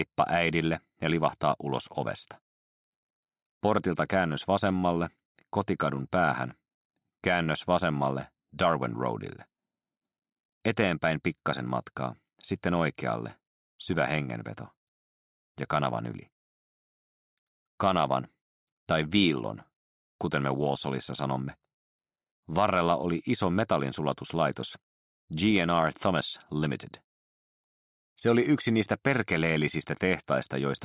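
No technical fault is audible anywhere in the audio, and the signal holds steady for its whole duration.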